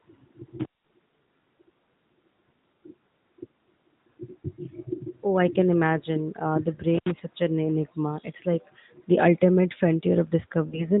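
At 0.60 s an intermittent contact opens the line for roughly 185 ms, running to 0.89 s; a second one between 6.94 and 7.11 s opens for about 77 ms, just before "is such an enigma". Each time a loose plug or cable briefly loses its connection, so the sound drops out with crackles at the break and remake, leaving faint hiss. On a waveform these show as sudden near-flat gaps bordered by sharp spikes; a spectrogram shows bright vertical clicks framing a dim, noisy band.

From 10.68 to 10.89 s the audio dips and smears, the signature of lost AMR speech frames: a gap of about 40 ms that fits two lost 20 ms frames. The decoder repeats the last good pitch and vocal-tract settings at falling gain, so the sound briefly warbles and fades before recovering roughly. On a spectrogram the harmonics stretch out flat and dim, capped below 4 kHz like the rest of this narrowband AMR audio.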